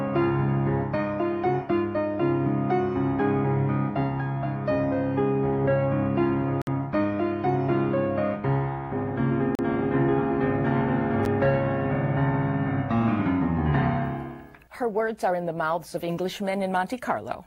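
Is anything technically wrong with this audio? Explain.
Yes, there are three dropouts. Bluetooth stalls at 6.62 to 6.67 s and 9.55 to 9.59 s: the sound halts for 56 ms and 37 ms, likely because the headphone buffer ran empty while delayed packets were resent. A block of digital silence at 11.25 s: roughly 9 ms of samples become zeros, with hard edges that make a tick.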